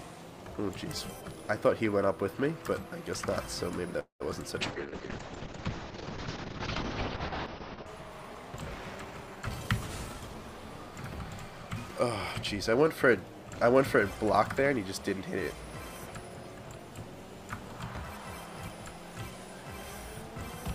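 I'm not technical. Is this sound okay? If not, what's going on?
No. From 3.99 to 4.22 s there is a call audio freeze: the sound stalls into a short fading buzz and then about a tenth of a second of silence before carrying on where it left off. The likely cause is delayed network packets leaving the receiver briefly with nothing to play.

From 4.62 to 7.92 s a call bitrate drop makes the sound rough, watery and muffled, with the bright top end cut off. The connection's estimated capacity fell, so the sound was squeezed into far less data until it recovered.

At 8.96 to 10.35 s, and again at 14.62 to 15.23 s, a jitter buffer speed-up makes the sound run about 10% and then 8% faster without changing pitch, so it feels hurried. The receiver had built up a backlog and trimmed tiny slices to catch up.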